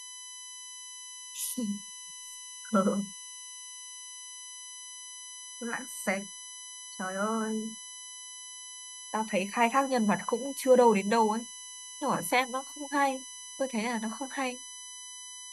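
Throughout the speech, a USB whine holds a fixed 1 kHz pitch, strongest at 6 kHz and roughly 15 dB below the speech. Current drawn in 1 ms bus frames leaks in through power or ground. Unlike mains hum, it sits on 1 kHz multiples, not 50 or 60 Hz.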